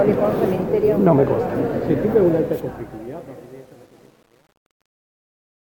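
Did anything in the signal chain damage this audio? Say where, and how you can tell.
Yes. From 2.25 s the fade-out turns gritty, and from 2.94 s to the end at 5.63 s the grit is at its worst. This is truncation distortion on a fade: an undithered gain or format stage, apparently keeping only about 9 bits, reduces the tail to coarse square steps.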